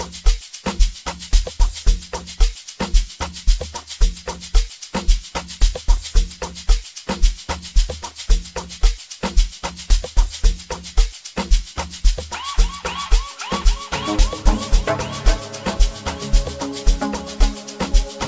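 Nothing technical goes wrong anywhere in this recording, so there's no fault to point to at any moment.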